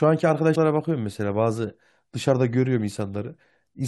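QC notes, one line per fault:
0.55 s, compressed frames skipped: about five 23.2 ms frames went missing or were rejected by the decoder, so the speech jumps ahead roughly a tenth of a second.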